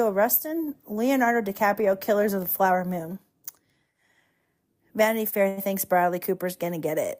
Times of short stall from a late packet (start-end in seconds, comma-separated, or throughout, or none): 5.29-5.59